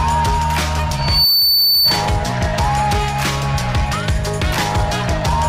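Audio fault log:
0.97–2.09 s, loudspeaker feedback squeal: a single pure tone at 4.5 kHz swells out of the sound over roughly a third of a second and settles around 5 dB above the programme before cutting off. The microphone is picking up the loudspeaker it drives, and at 4.5 kHz the loop gain exceeds unity, so that frequency reinforces itself on each pass until the amplifier limits it or the loop is broken.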